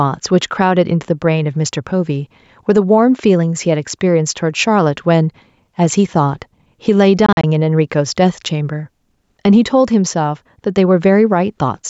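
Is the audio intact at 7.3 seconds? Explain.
No. Between 7.26 and 7.44 s there's a Bluetooth dropout: about 85 ms of audio goes missing in short holes scattered over roughly 170 ms, the longest about 43 ms. It's likely a few packets not reaching the headphones in time, and the speech picks up later as if it had kept going.

The same moment also has gain pumping, as the rest of the clip does. The level ducks by around 5 dB under loud sounds. That's likely the gain set too high and a fast limiter clamping down.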